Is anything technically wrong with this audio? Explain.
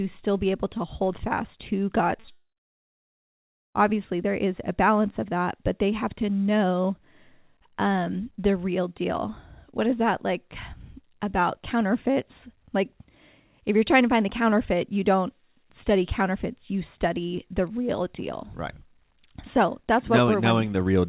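Yes. Short concealed packet loss at 2.20 to 2.26 s and 2.26 to 2.29 s: about 40 ms, then 20 ms, never arrived, so the receiver extended the preceding sound, leaving a brief smear.

Long network dropout from 2.31 to 3.77 s: the sound trails off as a fading continuation, then roughly 1.3 s of silence follows before the audio resumes. This is likely a network outage that dropped almost 1.44 s of audio. Throughout, the G.711 call codec leaves nothing above 4 kHz.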